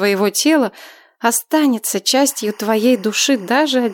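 Timecode bleed enters at 2.28 s and continues to the end of the clip. Linear timecode from an adjacent track or cable has leaked into the audio path. Its square-wave code flips between two pitches near 1 and 2 kHz, and the rhythm of that pattern fits 23.976-frame code. It sits roughly 30 dB below the main signal and is heard as a steady chirping warble behind the sound.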